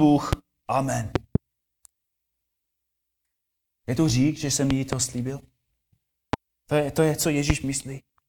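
Loud pops break through the speech at 0.33–0.35 s, as a double pop at 1.16–1.38 s, as a double pop at 4.71–4.95 s after "to řík že jsem", and singly at 6.33–6.36 s and 7.50–7.52 s after "je to je". Each rises about 15 to 20 dB above the speech, and the talking continues underneath. The likely cause is a voltage pulse from a switch, plug, static or driver glitch. On the waveform each pop is a tall isolated spike, and on a spectrogram it is a thin vertical broadband stripe.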